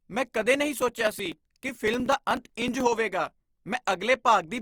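From start to finish the speech carries a grainy, rough texture, with the vowels sounding noisy where they should be clean. That's plainly audible damage, and Opus compression is the likely cause. The music-style CELT mode keeps each band's energy but patches starved bands with folded or noise content, hence grit rather than swirl. The bandwidth stays full, reaching about 20.2 kHz, and the roughness fits a low rate of around 24 kbps.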